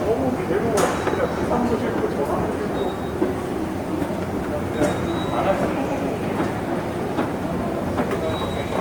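A recording of sounds has plainly audible Opus compression throughout, likely from a low-rate music-mode encode near 24 kbps. Tones sound grainy and rough, and a spectrogram shows noise-filled bands with few holes up to 20.1 kHz.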